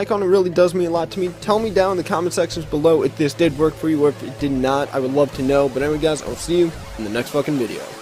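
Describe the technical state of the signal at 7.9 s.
At 7.9 s the signal is intact, with no dropout, clipping, distortion or other technical fault to be heard.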